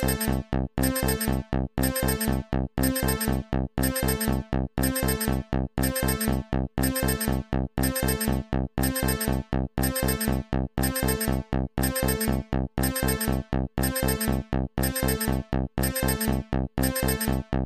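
No technical fault can be heard anywhere in this audio. There is nothing to point to by time, and nothing that needs a cause explained.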